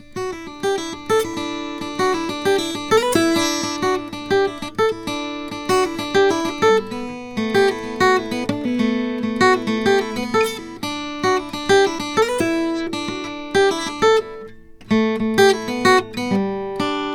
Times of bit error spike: none

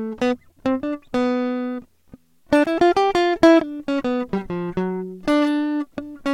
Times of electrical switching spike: 2.64-2.66

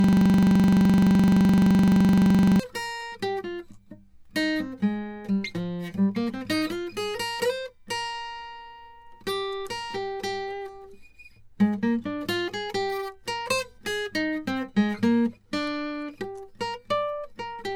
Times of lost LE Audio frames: none

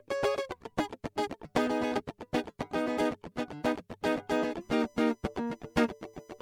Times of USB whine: 4.61-6.41

